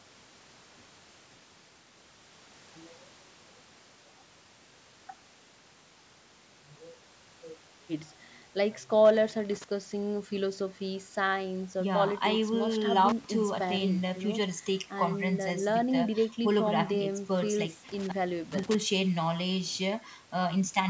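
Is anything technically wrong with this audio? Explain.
Yes, there's an intermittent contact. At 9.05–9.64 s, 13.09–13.24 s and 17.89–18.75 s a loose plug or cable briefly opens, so the speech cuts out for about 342, 124 and 404 ms with crackle at each edge. The call microphone processing is also audible, since nothing above 8 kHz comes through, but that is normal and not a fault.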